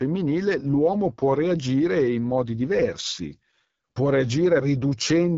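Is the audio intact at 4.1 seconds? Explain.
No. At 4.1 seconds, as across the whole clip, the speech carries AMR wideband (HD Voice) codec damage. The rough, raspy texture points to one of its lowest rates, near 8.85 kbit/s, where the pulse-driven vocal tract model runs short of bits. Nothing is heard above 7.5 kHz, but unlike a plain low-pass cut, the band just below that limit is filled with shaped noise rather than real detail.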